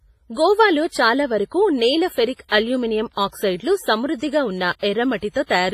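Throughout the speech, heavy codec damage is audible, likely from WMA compression: ringing, washy texture, breathing hiss, no content above 15.4 kHz, consistent with a low bitrate around 24 kbps. At 2.48 s and 4.79 s, pre-echo appears: block-spread quantisation noise precedes sharp attacks by roughly 32 and 36 ms, heard as brief hiss and softened onsets.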